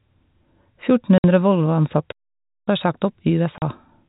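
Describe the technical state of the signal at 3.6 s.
Packet loss filled with silence from 3.58 to 3.62 s: about 40 ms of the speech, which fits two 20 ms packets, went missing and was replaced by dead silence, leaving a brief hard-edged gap in the narrow telephone-band G.711 sound.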